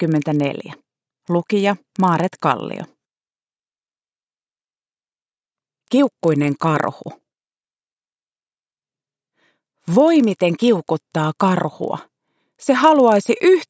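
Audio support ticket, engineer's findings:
Buzz at 25 Hz, throughout, present only while signal plays, riding on the audio as a rapid tick train every 40 ms. Probable component: resampler restarted on every block, likely in a down-conversion path. Each block is converted in isolation, so edge samples lack true neighbours, leaving a small error at every boundary.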